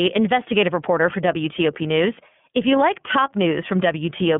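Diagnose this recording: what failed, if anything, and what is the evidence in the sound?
The iLBC codec stage has failed: the speech is confined to about 150 Hz to 3.4 kHz, with nothing above 3.6 kHz, and carries a plainly audible rough, synthetic texture throughout. Each 30 ms frame is coded independently, which fits the 13.33 kbps mode.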